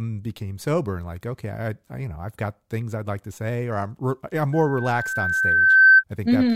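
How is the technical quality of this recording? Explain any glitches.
The recording has one serious fault near the end. From 4.52 to 6.04 s there is loudspeaker feedback squeal. The microphone picks up its own loudspeaker, and at 1.6 kHz the loop gain exceeds one, so a pure tone swells over about a second and a half to roughly 15 dB above the speech. On a spectrogram it is a bright horizontal line at 1.6 kHz, and the waveform balloons into a dense band.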